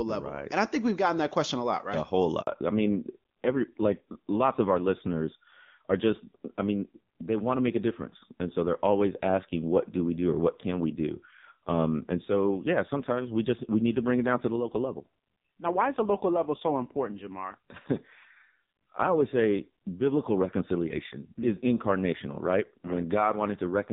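At 2.41 s there's a handover gap: the call jumped networks, no speech frames arrived, and the sound drops out for 60 ms until 2.47 s. From there on you get a fallback to narrowband. The clean HD Voice sound before the gap gives way to audio with nothing above 4 kHz, duller and rougher, which points to a low-rate AMR-NB mode around 5.9 kbit/s.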